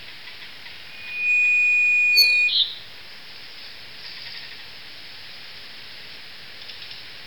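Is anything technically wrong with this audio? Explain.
Yes. From 0.88 to 2.56 s a piercing single tone at 2.5 kHz swells up over a fraction of a second and settles roughly 10 dB above the rest of the sound before cutting off. This is loudspeaker feedback squeal. A microphone was picking up the loudspeaker it was driving, and around 2.5 kHz the loop gain exceeded one, so that frequency kept reinforcing itself until it stopped.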